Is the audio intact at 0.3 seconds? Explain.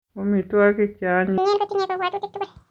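Yes, at 0.3 seconds the speech plays through cleanly, with no dropout, click, distortion or other fault at that point.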